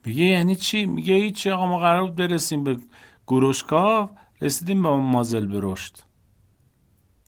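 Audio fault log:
No audible faults in this speech recording; nothing to log.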